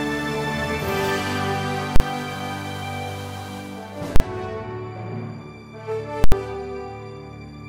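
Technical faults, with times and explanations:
1.96–2.00 s, 4.16–4.20 s and 6.24–6.32 s, invalid numbers at full scale: invalid values become full-scale output for 40, 40 and 80 ms blocks, each heard as a loud bang. Unlike clipping, nothing of the original sound remains inside the block.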